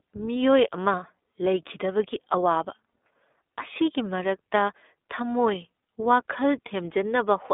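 From start to finish the speech carries iLBC codec damage: a band of roughly 250 Hz to 3.6 kHz, plainly rough, slightly synthetic vowels, and texture that resets frame by frame, fitting 20 ms frames at 15.2 kbps, unlike the smeared, warbling tails of longer-memory codecs.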